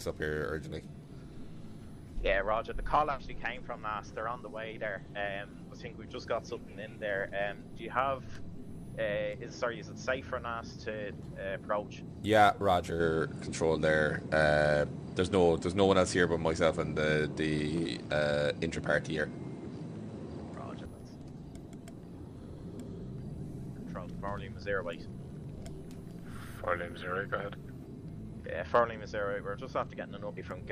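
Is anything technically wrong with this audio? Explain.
Yes. From 13.00 to 20.85 s the sound turns duller and shifts in level by a few decibels, with a new noise floor far below the signal and no gap at either transition. The likely cause is an input switched to a poorer device, whose narrower band removes everything above 9.8 kHz. On a spectrogram the top of that stretch is cut flat, and the waveform's envelope steps at both boundaries.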